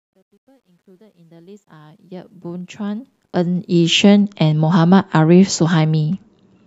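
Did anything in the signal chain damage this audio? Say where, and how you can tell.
Yes. The fade-in from the start to 4.0 s has truncation distortion. From 0.0 to 1.69 s it is worst: gritty. Quiet samples collapse into coarse square steps without dither. This points to a volume stage keeping only 12 bits.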